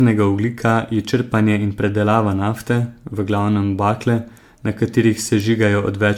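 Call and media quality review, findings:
Generation loss throughout: swirly, hollow speech, smeared attacks, nothing above 19.9 kHz. Likely about ten MP3 re-encodes at around 128 kbit/s, each pass stacking quantisation noise.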